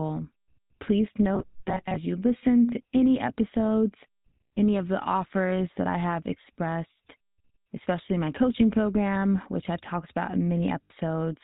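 GSM full-rate codec damage runs through the whole of this speech recording. The coder models the vocal tract and drives it with a sparse pulse train that keeps only every third excitation sample, so the voice has a plainly audible buzzy, gravelly roughness, and nothing above 4 kHz survives. The thin, band-limited result fits the 13 kbps full-rate coder. Robotic sound from repeated short buffers appears from 1.35 to 1.97 s, ending just before "you listen to any". Across most of that stretch the voice collapses into a rigid metallic buzz fixed at about 188 Hz while still loosely tracking the syllables. The likely cause is audio arriving too seldom, with playback looping a snippet of roughly 5.3 ms (one over 188 Hz) and skipping the real signal in the meantime. Lost GSM frames occur at 10.84 to 10.91 s, right after "which I've talked about". For 60 ms the sound is held as a rough, metallic ring instead of continuing naturally. 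The decoder is reusing the parameters of the last good frame, and a gap of that length points to three consecutive 20 ms frames going missing.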